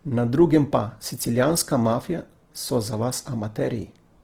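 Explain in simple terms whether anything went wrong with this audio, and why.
From start to finish the speech sounds rough and grainy, with a hiss-like texture clinging to it. The likely cause is Opus compression squeezed too hard: short of data, the encoder fills in missing detail with noise or copied lower tones, which roughens the sound.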